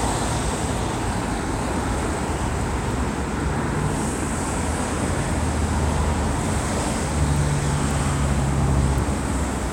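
Nothing in this recording of sounds stood out as a technical problem on listening.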